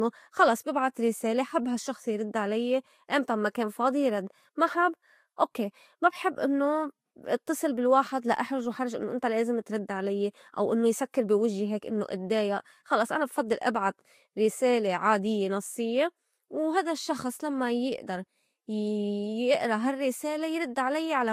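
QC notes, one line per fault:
Throughout, low-bitrate audio saved at a high bitrate: the speech keeps the artefacts of heavy compression and has nothing above 16 kHz. The likely cause is a low-rate Vorbis source, near 45 kbit/s, re-encoded as 256 kbit/s MP3, which cannot restore what was lost.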